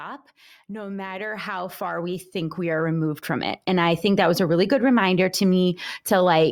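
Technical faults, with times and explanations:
0.66–4.03 s, automatic gain rising: over roughly three and a half seconds the level of the speech and the room noise behind it climbs together by about 16 dB in a smooth, continuous ramp rather than a step. The automatic gain control judged the incoming signal too quiet and raised its amplification gradually. Because the gain acts on everything it receives, the background swells in step with the talker, giving a slow fade-up that is audible as the noise floor rising.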